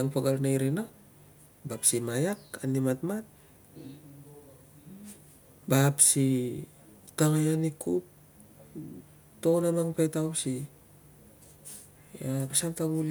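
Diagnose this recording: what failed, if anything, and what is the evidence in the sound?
Nothing stood out on listening to this speech recording, with no point in the sound that suggested a failure at any stage of the chain.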